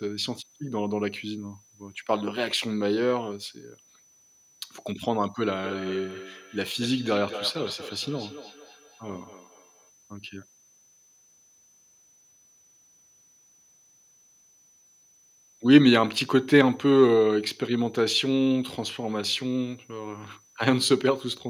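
A switching power supply running in an audible burst mode or beating with another supply puts a faint whistle through this speech, wandering between about 6.0 and 6.1 kHz, well below the voice. From 5.64 to 9.92 s, a feedback echo between two devices forms as one replays the other's microphone feed; each syllable returns about every fifth of a second, thinner and ringing, peaking about 15 dB under the speech.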